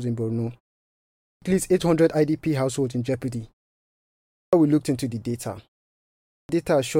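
At 1.05, 4.14 and 6.10 s, each after a pause of 0.5 to 0.7 s, the speech resumes with a clipped start after a pause: roughly 0.37 to 0.39 s of sound is swallowed, so the speech bursts abruptly out of silence without its opening sounds. The output device has gone idle during the gap and has not woken in time. Unlike muted pauses, which only drop the background between phrases, this removes the speech itself.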